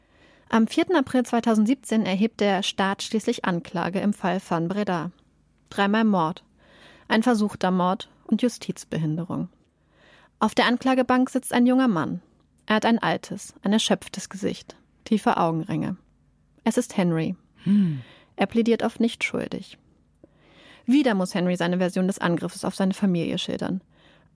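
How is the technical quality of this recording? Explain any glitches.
Nothing stood out as a technical problem when listening to this recording, so there are no glitches to explain.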